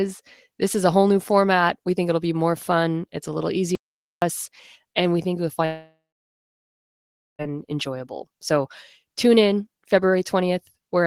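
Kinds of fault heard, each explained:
Audio dropout to silence: from 3.75 to 4.22 s, right after "fun it's a little", the sound cuts to silence with no room tone for about 0.47 s, then resumes mid-flow. The likely cause is a lost input, with silence recorded meanwhile.
Long network dropout: from 5.65 to 7.42 s, after "and we think you'll", about 1.74 s of audio never arrives. The receiver likely stretched the last sound into a fading buzz or hiss, leaving roughly 1.4 s of silence before the audio returns further on, minus the lost part.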